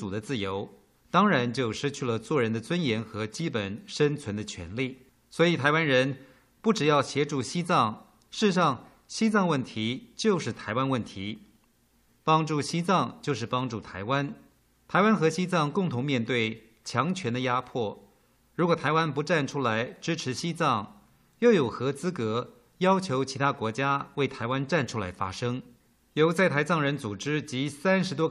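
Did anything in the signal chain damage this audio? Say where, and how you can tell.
No, nothing stood out on listening that would point to damage at any stage of the signal chain.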